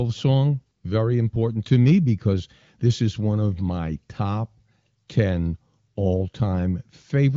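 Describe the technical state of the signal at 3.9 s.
At 3.9 s the speech is intact, carried cleanly through the AMR wideband (HD Voice) codec at a high rate of around 23 kbit/s, with a band-limited sound and nothing above about 7.7 kHz.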